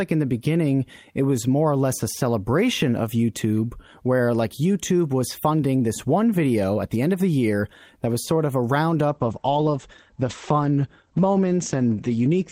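At 9.08 s a call bitrate drop sets in and lasts to the end at 12.52 s: the encoder falls from 32 to 11 kbps, turning the speech rough and muffled. A spectrogram shows energy above 8 kHz vanishing, where it previously reached 20 kHz.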